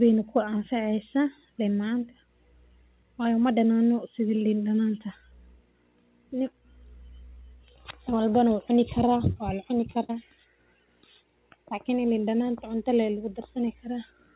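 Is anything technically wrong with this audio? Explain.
Yes, the speech has two dropouts in transmission, heard through a narrowband call codec whose band stops at 4 kHz, which fits G.711 mu-law.

Short concealed packet loss, 9.32 to 9.38 s: about 40 ms of audio arrived too late for the decoder, so the receiver stretched the preceding sound for roughly 37 ms before blending back in. It comes across as a brief smear or wobble.

A burst of packet loss, 10.04 to 10.11 s: about 60 ms of consecutive audio went missing. The receiver extended the last sound for around 50 ms while fading it down, giving a short held buzz or hiss, then playback jumps ahead with that stretch gone.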